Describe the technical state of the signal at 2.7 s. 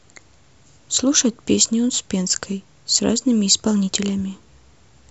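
At 2.7 s you're hearing the resampler restarted on every block, a fault running through the whole clip. Each 50 ms chunk gets converted on its own, likely 44.1 to 48 kHz, so every edge picks up a small error. You get a steady 20 Hz ticking under the speech.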